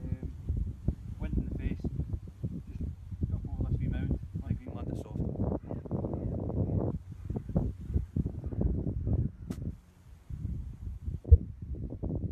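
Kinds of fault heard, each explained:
Damaged data in a compressed stream: five brief glitches, the last and longest about 44 ms near 11.3 s, where corrupted frames threw the decoder out of sync.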